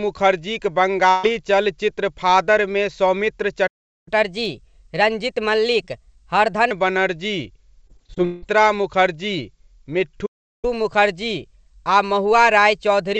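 At 1.10 to 1.25 s comes a burst of packet loss. The receiver stretched the last sound over a gap of about 134 ms, so you hear a brief held, fading sound rather than silence. When sound returns, roughly 140 ms of content has been skipped. That filled-in tail distinguishes it from a stall.

From 3.67 to 4.08 s there is a playback stall. The output goes completely silent for about 0.39 s, likely because the player ran out of buffered data or its thread was blocked. Nothing fills the gap, unlike the packet-loss concealment earlier.

Catch-up at higher speed follows from 4.08 to 6.71 s. The backlog is played back at 1.15 times normal speed through resampling, so tempo and pitch rise together by about two semitones. Because pitch and speed move in lockstep, this is catch-up and not a deliberate pitch change.

Between 7.87 and 8.44 s there is repeated packet loss, which gives a robotic sound. 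Seven holes follow one another in quick succession, the longest about 175 ms, and together they are patched across about 43 percent of that stretch. The result is choppy, a rapid series of patched dropouts rather than the single smooth fade heard at 1.1 s.

A second playback stall runs from 10.26 to 10.65 s: about 0.37 s of dead silence, again likely from the player being starved of data.

A second catch-up at higher speed runs from 10.65 to 13.17 s. Playback runs 1.1 times fast, with pitch raised by about one and a half semitones. The rise is milder than the first catch-up, but it is the same telltale coupling of speed and pitch. Throughout the clip, the G.722 call path leaves nothing above about 7 kHz, consistent with its band limit.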